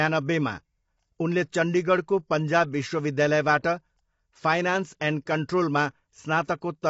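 Throughout, the speech is rough and grainy, cut off above 7.7 kHz, which points to likely low-delay AAC compression at around 24 kbps.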